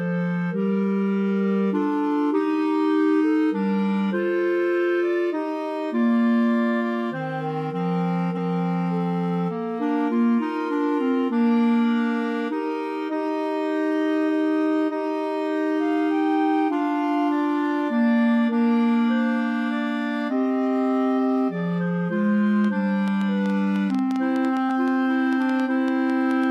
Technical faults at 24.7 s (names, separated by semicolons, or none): train of clicks; compressed frames skipped